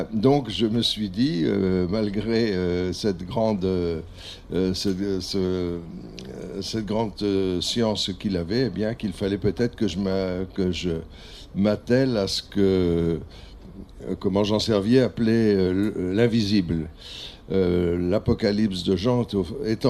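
No technical faults are audible.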